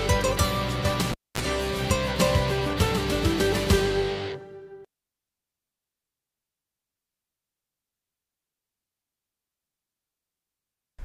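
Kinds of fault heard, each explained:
Cable pulled and plugged in: a live lead is yanked out and reinserted, so a pop opens roughly 240 ms of near silence, then about 30 ms of 50 Hz mains buzz as only the tip touches, and a second pop brings the sound back, from 1.12 to 1.41 s. Unlike a plain dropout, the pops and the brief hum burst mark a physical contact.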